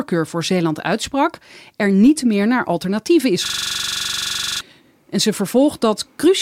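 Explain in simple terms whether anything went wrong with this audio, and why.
After "meer naar alternatieven is", from 3.46 to 4.61 s, a system hang loop causes a 23 Hz buzz, not silence. The computer froze while the same 43 ms scrap replayed 27 times, and about a second of audio was lost.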